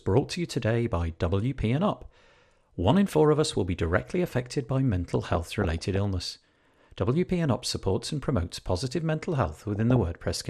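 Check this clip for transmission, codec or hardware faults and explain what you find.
Yes, there are two faults: codec damage through the whole clip and two bursts of reception errors.

Throughout, the speech sounds plainly dull and granular with a gurgling edge. This is likely MP2 compression at a low rate, consistent with around 80 kbps. On a spectrogram, whole upper sub-bands switch on and off in blocks.

From 5.10 to 5.96 s and 9.45 to 9.96 s, there is DAB burbling. Bit errors in the MP2 data, at well under one percent, slip past error correction and corrupt individual sub-bands, producing bubbling blips. A spectrogram shows short, isolated bursts confined to narrow bands.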